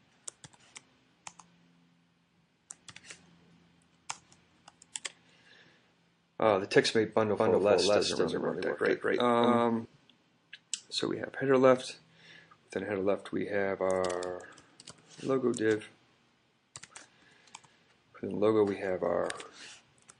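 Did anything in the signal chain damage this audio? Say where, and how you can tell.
Yes. Throughout, the audio sounds watery and swirly, with dulled treble and smeared attacks. This is likely MP3 compression at a low bitrate, around 48 kbps, at the codec stage: starved of bits, the encoder drops the top end and lets weak frequency lines flicker frame to frame.

From 4.93 to 4.95 s a short hiss, about 12 dB above the background, leads into a sharp attack, which itself sounds softened. This pre-echo comes from the codec spreading quantisation noise across a 48 ms transform block without switching to short blocks, so noise leaks ahead of the transient.

Between 7.39 and 9.85 s a second, full-band copy of the sound trails the original by about a fifth of a second, at roughly the same level, with no reverberant tail, and it appears and vanishes abruptly. This doubled audio track most likely comes from a duplicate capture path or an edit mixing two offset copies.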